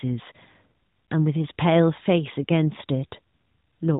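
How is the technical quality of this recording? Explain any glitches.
No glitches can be heard in this speech recording, which comes through a narrowband mobile-phone path with nothing above about 3.8 kHz and only light coding damage, consistent with AMR-NB at its top 12.2 kbps mode.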